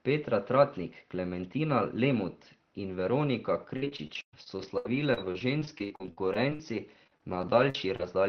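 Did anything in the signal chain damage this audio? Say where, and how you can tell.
Yes, at the network stage: repeated packet loss (robotic sound) from 3.76 s to 8.06 s. Around thirty short holes, the longest 119 ms, are patched by stretching the last sound, giving choppy speech with about a fifth concealed. Unlike steady Opus coding noise, these breaks recur and come and go.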